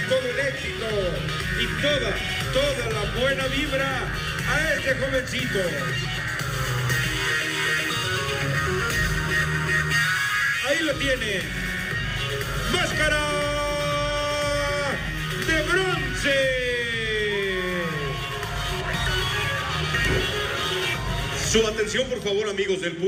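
Nothing in the audio stood out as a technical problem on listening.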